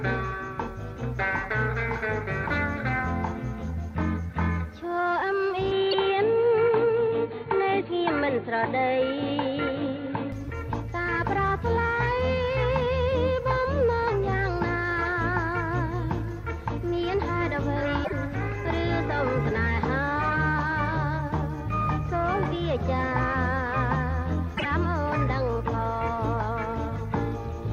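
At 5.71 s the sound abruptly goes dull and boxy, with nothing above about 4.4 kHz, faint new background noise far below the signal and no real level jump. That's most likely the input switched to a poorer device, and it clears up again at 10.32 s. Shortly after the dull stretch begins, at 5.91 to 5.95 s, there's a quick glitch, and similar blips follow at 18.01 to 18.13 s and 24.54 to 24.65 s. Those are damaged data in a compressed stream: the decoder misreads the corrupted frames, loses sync and skips ahead to the next frame it can lock onto.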